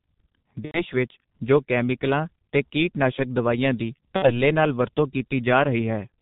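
Speech heard through the G.723.1 codec, at a rate that fits roughly 6.3 kbit/s, sounds heavily muffled and hoarse, with an empty spectrogram above 4 kHz and smeared consonant energy. VoIP packet loss concealed by the speech codec breaks in from 0.65 to 0.84 s and from 4.16 to 4.34 s, which fits three and two lost 30 ms frames. In each gap the decoder stretches the last sound into a fading buzzy tone or coloured noise, seen as a tapering waveform.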